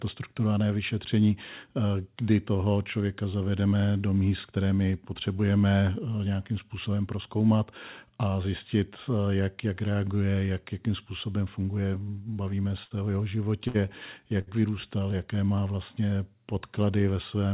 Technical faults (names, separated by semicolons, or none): repeated stalls (stutter); short stall from a late packet